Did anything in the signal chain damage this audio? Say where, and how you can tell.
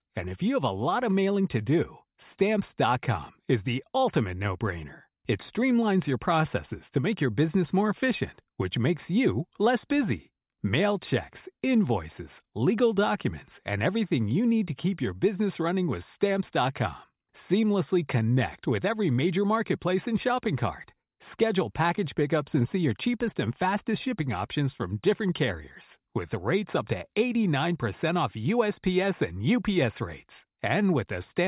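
No, nothing along the chain seems to have damaged this speech recording, and I can't hear anything that points to a problem at any stage.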